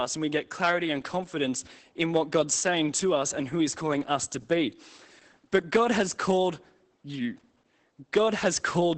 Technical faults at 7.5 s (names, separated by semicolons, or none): Opus voice compression